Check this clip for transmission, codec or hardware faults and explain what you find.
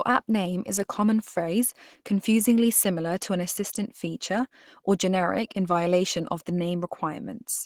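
One fault is present, and it runs through the whole clip. Opus compression damage is plainly audible. The speech sounds hoarse and somewhat muffled, with a grainy, rough texture. This points to the encoder's hybrid speech mode at a low rate, likely around 16 kbps. The bandwidth stays full, extending to about 20.4 kHz, but too few bits are spread across it, so the detail is coarse.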